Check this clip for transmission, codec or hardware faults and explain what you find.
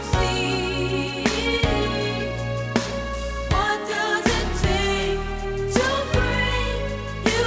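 Nothing here points to a transmission, codec or hardware problem; the audio sounds like it came through an ordinary wideband call path, and the top end stopping at about 8 kHz fits a G.722 link doing its normal job.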